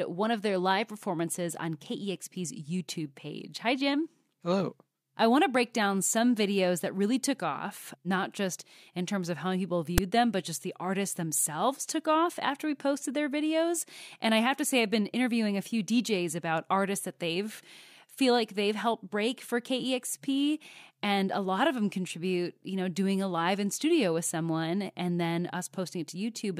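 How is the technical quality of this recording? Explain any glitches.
One glitch stands out in the speech. File tags played as audio, at 9.98 s, between "terms of how people" and "them but just the": a small block of text tags was decoded as samples, producing a short, loud snap.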